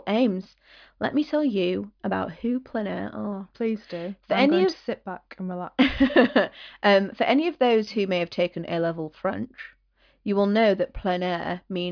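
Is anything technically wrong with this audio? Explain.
No, nothing is technically wrong with this audio.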